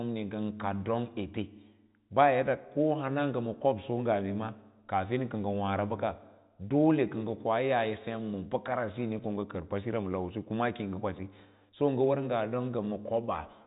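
The speech carries the narrow telephone band of G.711 coding, with nothing above about 3.8 kHz and only a faint level-following hiss from its logarithmic quantisation, and no technical faults can be heard.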